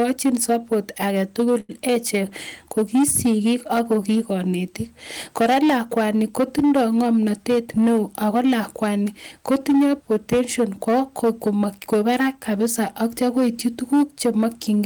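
Right from the start there's hard clipping: the speech is pushed about 10 dB past what the chain can pass, so a fair share of peaks get sliced flat and turn fuzzy and harsh. At 1.60 to 1.72 s you'll catch a short stall from a late packet. The buffer ran dry, the last bit of sound was stretched for 87 ms, then everything picked up again a touch late with nothing lost.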